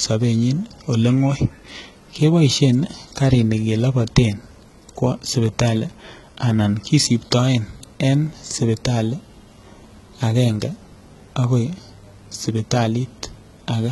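From start to finish the speech carries heavy damage that is likely HE-AAC compression, at a rate that sounds as low as about 16 kbps. The treble is synthetic: upper bands are copied from lower ones and shaped only coarsely, so s sounds come out gritty and lispy, with a metallic sheen. On a spectrogram, the band above the crossover looks like smeared, repeated texture rather than true harmonics, and everything stops sharply at 11.8 kHz.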